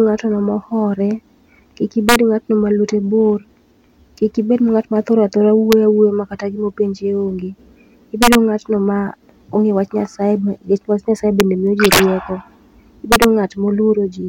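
A gain or summing stage lets peaks in this speech run past the integer limit and wrap to the opposite sign instead of being held at the ceiling. That is integer overflow, and each wrapped peak leaps across the full range as a violent crack, harsher than clipping. It strikes at 2.09 to 2.16 s, just before "ng'atno ma lwete bor"; at 5.72 s; at 8.23 to 8.35 s; at 11.40 s, between "wach nyasaye" and "miyo ji"; at 11.85 to 11.99 s, right after "miyo ji", the worst, pushed about 8 dB over; and at 13.12 to 13.24 s.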